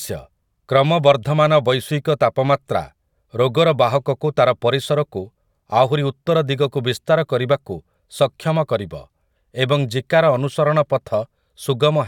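Nothing technically wrong turns up anywhere in this bit of speech, so there's no fault to time or trace back to a cause.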